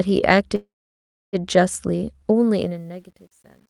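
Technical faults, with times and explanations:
0.55 to 1.36 s, call audio freeze: the sound stops and the last moment is stretched into a brief fading buzz that gives way to about 650 ms of silence. The sound then resumes exactly where it left off, so nothing is skipped and everything after arrives about 775 ms later. This is likely packets held up in transit until the jitter buffer ran dry. A dropout or concealed packet loss would remove audio rather than insert a pause.
2.39 to 3.69 s, truncation distortion on a fade: the fade-out turns gritty as the level drops. From 2.96 s the distortion is at its worst. The gain stage appears to keep only about 10 bits without dither, so the quietest part of the waveform collapses into a few square steps. Unlike broadband noise or codec smearing, the grit follows the signal level and worsens as it gets quieter.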